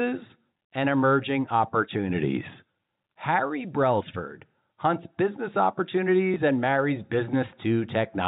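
At 6.34 s, just before "and marries", packet loss with the last packet repeated fills a 20 ms hole with a copy of the previous audio, giving a small blip instead of the silent gap of a dropout.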